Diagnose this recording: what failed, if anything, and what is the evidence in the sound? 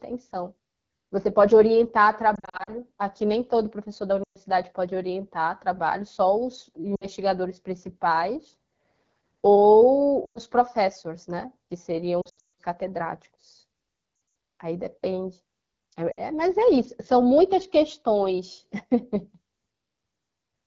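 Codec stage: throughout, the speech sounds rough and raspy, typical of AMR wideband (HD Voice) coding at a low rate, consistent with 8.85 kbit/s.

Radio link: lost AMR speech frames at 2.35, 4.23, 6.96, 10.25, 12.21, 14.15 and 16.12 s. The decoder replays stale parameters with falling gain, causing warbles and fades, longest near 12.2 s.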